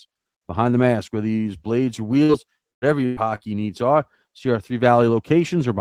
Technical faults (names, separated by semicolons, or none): burst of packet loss